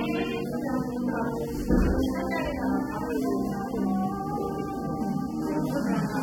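Throughout, the sound is dull and fizzy, likely from low-bitrate AAC compression; a spectrogram shows nothing above 17.3 kHz.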